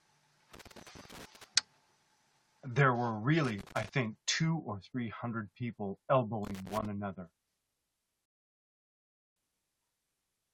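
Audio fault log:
0.54 to 1.44 s, 3.44 to 3.89 s, 6.45 to 6.86 s: loose connector crackle, irregular scratchy bursts as an intermittent contact repeatedly breaks and remakes the signal path, chopping the speech.
8.26 to 9.36 s: rebuffering stall, the speech drops to silence for about 1.1 s, then resumes at the exact point it stopped, as playback waited for data.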